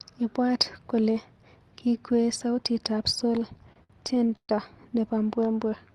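From 3.57 to 4.51 s, just after "kole kikwee sautitab sol", the speech drags and stutters in nine short hitches, the longest lasting 131 ms. These are repeated stalls (stutter): packets arrived late, the jitter buffer kept running dry, and the receiver stretched the last sound to fill about 294 ms, roughly a third of that stretch, with nothing actually lost.

From 5.69 to 5.94 s the speech slows to 86% speed with no change in pitch, adding 44 ms. This is a jitter buffer slow-down: with its reserve low, the receiver repeated single pitch periods to rebuild it, audible through the Opus call path's 12 kHz bandwidth.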